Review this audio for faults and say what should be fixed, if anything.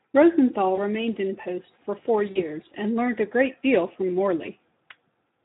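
Speex codec damage runs through the whole speech clip. The sound is hoarse and noisy because the coder has too few bits for the excitation, which fits a bitrate near 11 kbps. Unlike packet loss, the roughness is steady and never drops out. Raising the Speex quality setting, or moving to a modern codec, would prevent it.

VoIP packet loss concealed by the speech codec appears at 0.75 to 0.80 s, just before "remained in post for", and at 2.31 to 2.43 s, between "in post for four" and "and learnt a great". The lost stretches sound like about 20 ms and 40 ms. Each gap is filled with a stretched extrapolation that fades, and the distortion lingers briefly after audio resumes, which distinguishes it from a clean dropout or a click. Jitter buffering or forward error correction would prevent it.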